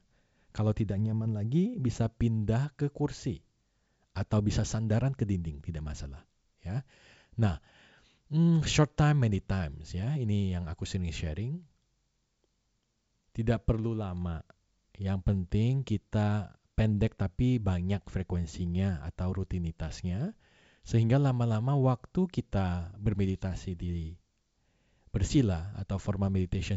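At 1.95 to 2.04 s, bit errors on an ADPCM link at a low rate, well under one percent, corrupt a handful of frames of the G.722 stream. The decoder's step size and predictor go astray, so the speech breaks into a rough, popping burst with a brief change in level.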